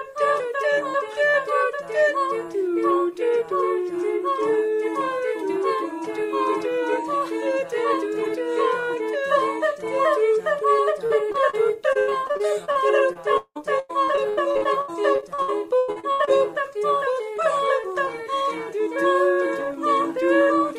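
Short concealed packet loss occurs at 11.06–11.12 s, 11.32–11.36 s and 11.50–11.55 s, removing about 40, 20 and 40 ms. Each time the receiver extends the preceding sound to cover the hole and then blends back, leaving a brief smear or wobble.

Repeated packet loss (robotic sound) follows from 11.93 to 12.77 s, with eight gaps (longest 84 ms, about 31% of the span concealed), and from 13.13 to 16.40 s, with nineteen gaps (longest 183 ms, about 32% concealed). Successive patched holes make the audio choppy, with pieces missing.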